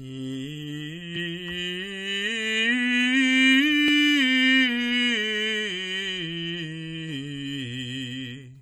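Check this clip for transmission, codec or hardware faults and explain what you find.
One fault turns up: a single short glitch in the music, right at about 1.15 s.

That's damaged data in a compressed stream. A stretch of the encoded bytes got corrupted, so the decoder either misread those frames or threw them out, lost its place, and had to hunt for the next valid frame header before it could carry on. You hear it as a quick, unmusical blip that's over almost before it registers, lasting only around 14 ms.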